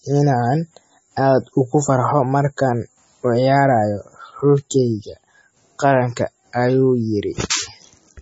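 From start to finish the speech sounds watery and swirly, with a dull top end and nothing above 7.7 kHz. The likely cause is heavy MP3 compression at a low bitrate, around 24 kbps, so the encoder trims the treble and drops weak frequency lines that flicker between frames.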